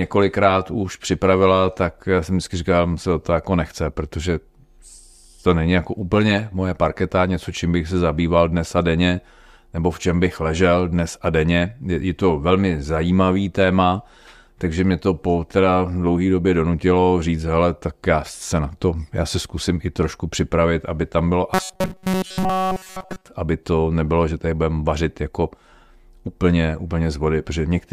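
From 21.54 to 23.26 s, after "připravit aby tam bylo", the speech becomes robotic sound from repeated short buffers. It is a rigid, metallic buzz at 188 Hz throughout. This is likely one tiny chunk, about 5.3 ms long, looping. Normal speech resumes at "aby to nebylo že".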